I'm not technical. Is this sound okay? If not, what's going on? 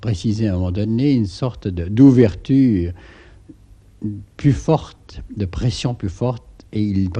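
No. The audio was likely squeezed too hard by MP2 compression, which drops upper frequencies and roughens the rest, so throughout it sounds dull, gurgling and grainy.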